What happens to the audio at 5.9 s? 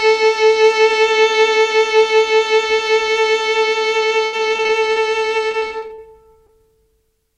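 Repeated packet loss (robotic sound) runs from 5.52 to 6.50 s, so 5.9 s falls in the middle of it. The stream keeps dropping or delaying data, and each hole is patched by stretching the sound that came just before. Here there are eight such holes, the longest about 43 ms, covering roughly 17% of the stretch. The music turns choppy, with fragments audibly missing between the patched bits.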